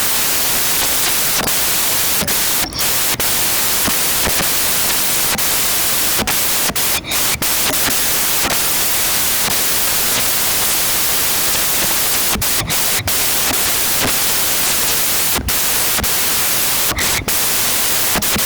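From start to end, the reader assembles every sample from the wrong bytes, offset, swapped or misaligned, so the rapidly changing low-order bits land in the high-order positions. The speech comes out as loud, harsh broadband noise, close to white on the louder passages.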